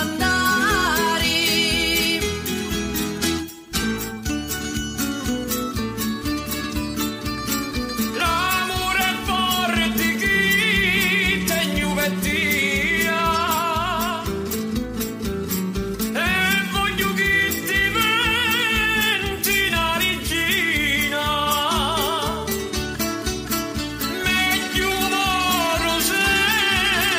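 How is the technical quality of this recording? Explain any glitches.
Nothing in this recording needs explaining, since there aren't any glitches to be heard anywhere in it.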